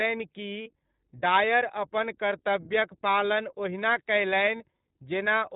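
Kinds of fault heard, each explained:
iLBC codec: the speech passes through a narrowband VoIP coder working on 20 ms frames, which fits a bitrate near 15.2 kbps. Nothing above 4 kHz survives, and the coding damage is plainly audible as a rough, slightly synthetic edge on the speech.
Lost iLBC frames: at 0.62 s, just before "डायर अपन कर्तव्यक पालन", and again at 4.56 s, roughly 40 ms drops out. The decoder fills each gap by repeating the last pitch cycle mixed with noise, heard as a brief buzzy held vowel before the voice comes right again almost at once.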